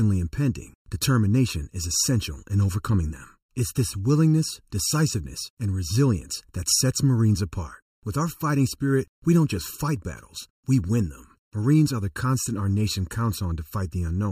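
Speech, with channel delay (comb filtering) present for the whole clip. One channel arrives late by a little under a millisecond, and when the two are folded to mono the shared content cancels at regularly spaced frequencies. The first notch falls around 700 Hz, with further notches at roughly 2.1 kHz, 3.5 kHz and upward. The result is a steady hollow, phasey colouration on the speech that does not move over time.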